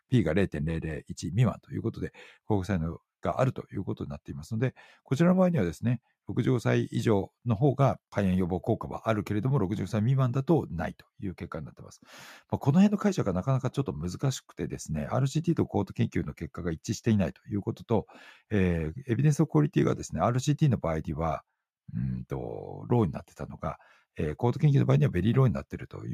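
Listening to the speech recording, nothing stood out as a technical fault at any point.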